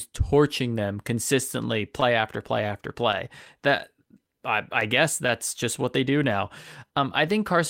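Throughout, clock drift between sender and receiver leaves the sender's clock running about 3 percent slow, so the receiver's buffer keeps draining and the timing sags unevenly. From 0.2 to 7.53 s, repeated timing corrections stretch the audio to 98 percent speed, adding around 150 ms overall and giving a faintly unsteady, dragging tempo. From 2.0 s to the end, scattered short gaps from around ten late or lost packets are patched by extending the preceding sound, each fill only about 15 ms at most, heard as brief ticks or smears.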